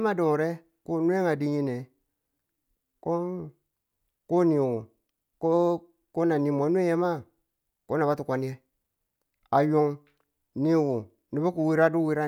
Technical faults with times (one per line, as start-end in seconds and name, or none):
none